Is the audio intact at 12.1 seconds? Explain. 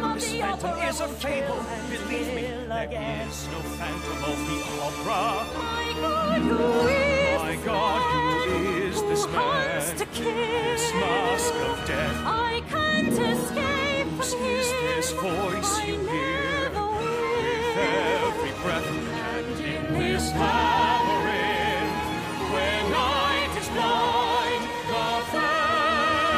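Yes, at 12.1 seconds the audio is intact, with no dropout, click, distortion or other fault to be heard at that moment.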